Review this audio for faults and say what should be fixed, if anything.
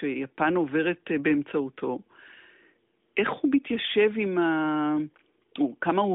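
Nothing here needs fixing: the speech comes across like an ordinary mobile call through the AMR narrowband mobile codec, with the light coding texture you'd expect from what sounds like its 12.2 kbps mode and nothing above about 3.7 kHz, which is simply how that kind of line is built to sound.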